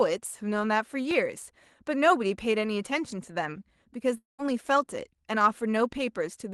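At 1.11 s there is a block of digital silence: a hole of about 1.33 ms where the waveform drops to a flat line and then jumps straight back, with no fade on either side. The length fits a 64-sample block that the program likely failed to fill in time. With a hole this short, the two abrupt edges merge into a single tick. On a spectrogram it appears as a thin vertical line of broadband energy spanning the full frequency range.

From 4.17 s to 4.40 s the speech breaks off and is replaced by something other than the real signal. For about 210 ms the last sound is stretched into a fading buzz, then about 150 ms of near-silence follows before the speech resumes further along, with about 220 ms of the original missing. This is likely a long network dropout, with the receiver concealing the gap until it ran out of material. On a spectrogram, the speech harmonics freeze into smeared horizontal bands that fade, leaving an empty stretch. 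In the waveform, the envelope decays smoothly to almost nothing, then the speech picks up abruptly.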